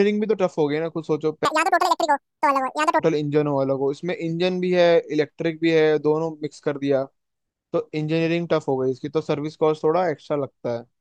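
From 1.45 to 3.00 s, the audio is read two samples at a time (double speed). The reader treats each pair of samples as one frame, as if the stream had two channels or samples twice as wide, so this stretch of speech races by at twice the rate and a full octave (12 semitones) higher. A pitch shifter would raise the voice without shortening it. Here timing and pitch jump together by an exact factor of two.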